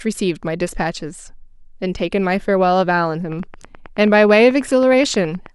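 From 3.32 s to 5.47 s a train of clicks runs under the speech: about twenty sharp, similar ticks at a steady 9.35 per second, reaching roughly the level of the speech itself and ticking on through the pauses. A regular pulse like this is likely interference from nearby equipment or a faulty connection or power supply. On a waveform it shows as evenly spaced spikes, and on a spectrogram as thin vertical lines spanning the whole frequency range.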